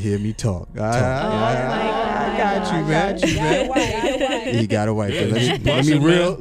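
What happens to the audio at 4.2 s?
At 4.2 s the audio is inside a doubled audio track that runs from 0.88 to 4.46 s. A second copy of the same full-band sound plays about half a second behind the original and at roughly the same loudness, most likely because the signal is being captured again through a slower path. The late copy carries no decay or room colour, so it sounds like a clean, overlapping repeat, and it cuts off abruptly at 4.46 s.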